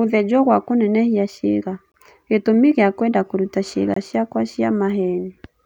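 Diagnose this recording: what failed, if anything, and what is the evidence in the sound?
A gap between chunks interrupts the speech at 1.92 s, after "gwa kũnenehia ciĩga", and at 3.94 s, before "ciakwa 'cia". These are hard-edged 23 ms silences 2.02 s apart, pointing to late-starting chunks at playback. Unlike a dropout, no sound is lost, and it resumes where it stopped.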